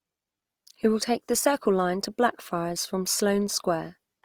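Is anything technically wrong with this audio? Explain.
Yes. Opus compression runs throughout the clip, from start to finish. The damage is plainly audible: the speech sounds grainy and rough rather than swirly, and its detail is smeared into a noisy texture while the full bandwidth is kept. This likely comes from Opus's music-oriented CELT mode at a low rate, something like 24 kbps. Each band keeps its energy, but bits run short, so band contents are filled by folding or noise.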